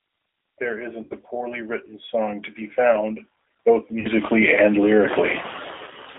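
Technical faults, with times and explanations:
Throughout: G.729 codec. The speech was squeezed through an 8 kbit/s G.729A coder that rebuilds each 10 ms frame from a vocal tract filter, pitch predictor and a few pulses, on a line passing only about 300 Hz to 3.6 kHz, leaving a thin, plainly rough, synthetic tone.
1.03–1.15 s and 4.00–4.07 s: VoIP packet loss concealed by the speech codec. Runs of packets went missing, about 80 ms then 50 ms, and the decoder stretched its last pitch and filter with falling gain, giving a stretched, fading smear that stays weak briefly afterwards.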